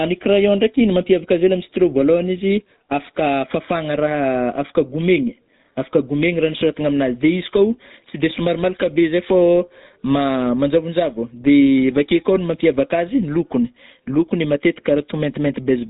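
From start to finish the speech carries GSM full-rate codec damage: a buzzy, gravelly roughness from pulse-driven excitation, with nothing above 3.8 kHz, unlike plain band-limiting.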